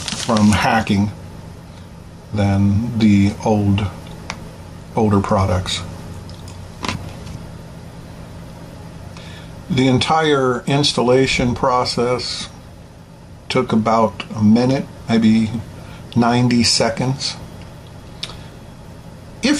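The input gain is likely set far too high for the microphone, so a fast limiter or compressor keeps clamping down on every loud sound throughout the recording. The result is gain pumping: the level ducks by around 5 dB each time a loud sound arrives, and recovers again afterwards. Loud and quiet parts are pushed closer together in level, leaving the whole clip audibly squashed and breathing.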